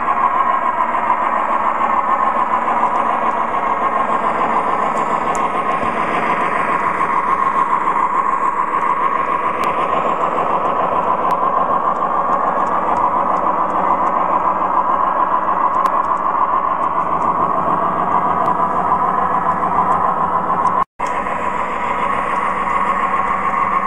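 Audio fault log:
9.55–9.73 s, 11.22–11.31 s, 15.58–15.86 s and 18.46 s: compressed frames skipped. About a tenth of a second of sound jumps forward each time.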